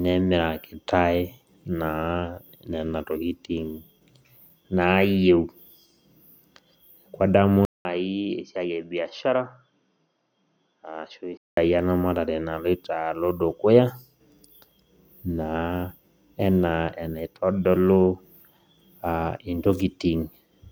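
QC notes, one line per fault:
7.65 to 11.57 s, input switched to a poorer device: after a gap of 200 ms the speech turns dull and boxy, with nothing above 6.4 kHz. It also drops roughly 10 dB in level and picks up a faint new background noise well below the speech. At 11.57 s the full, brighter sound returns. The likely cause is a mid-recording change to another microphone or a headset's call profile, which passes a narrower band and has its own tone and noise.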